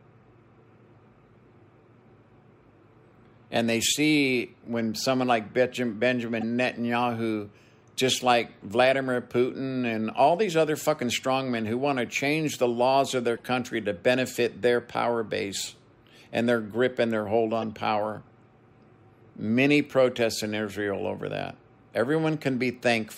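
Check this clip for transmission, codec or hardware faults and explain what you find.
Corrupt frames were decoded three times, at 6.41–6.43 s, 13.37–13.40 s and 17.60–17.64 s. Flipped bits went unchecked, so the decoder misread gains and codes and put energy at the wrong frequencies. Each is a brief chirp or noise burst, peaking around -20 dBFS at 6.4 and 17.6 s and near -35 dBFS at 13.4 s.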